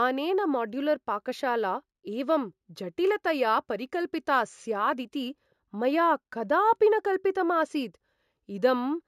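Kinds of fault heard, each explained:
Imaging from linear upsampling: the rate was raised by joining samples with straight lines, which fits a 16 kHz source taken to 48 kHz. The top sounds dulled, and a faint mirror copy, roughly 35 dB down, sits at 8 to 16 kHz, adding metallic shimmer to sibilants.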